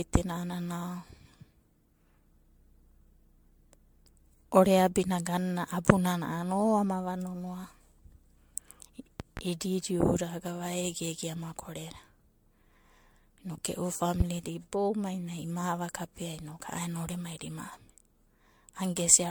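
Generation loss runs through the whole of this speech recording: a swirly, hollow smear with blurred attacks, which points to likely repeated MP3 re-encoding around 100 kbit/s, perhaps seven passes. A loud pop occurs twice between 9.20 and 9.41 s, about 10 dB above the speech, and again once at 14.20–14.24 s, about 15 dB above it. These are sharp transient spikes sitting on top of the audio, likely from a voltage step or switching glitch in the chain.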